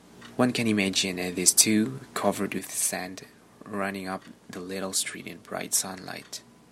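Speech, with one channel dropping out from 2.59 s through to the end of the clip. At that point the level falls abruptly by about 6 dB and stays down. This is likely a lost stereo channel: once folded to mono, material shared by both sides is halved, and anything carried only in the missing side disappears entirely from the sum.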